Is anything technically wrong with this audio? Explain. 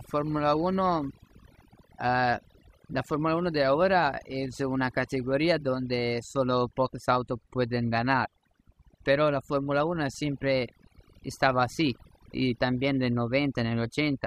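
Yes. Throughout this speech recording there is overdone noise removal. The noise reduction was pushed far too hard, so it cuts individual frequency bands deep or drops them whenever they resemble its noise estimate, and quieter parts of the voice vanish along with the noise. The background drops and breaks up into twinkling, warbling specks. A plain noise gate would instead shut the whole signal at once, leaving clean silence without those scattered specks.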